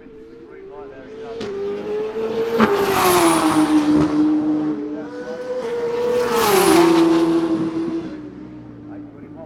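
No technical faults can be heard anywhere in this recording of sound; the signal stays intact and continuous throughout.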